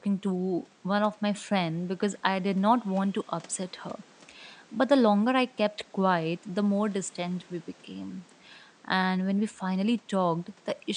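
Nothing stood out on listening to this speech, apart from the quiet background of the room sitting about 30 dB below the talker.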